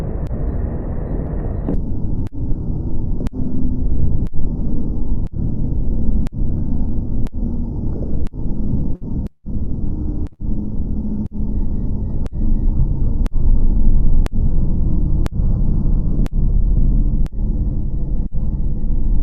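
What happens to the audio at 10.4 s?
At 10.33 to 10.42 s there is a burst of packet loss. The receiver stretches the last sound over about 56 ms, fading it down, then resumes with about 60 ms skipped. Unlike a clean dropout, the gap is filled, not silent.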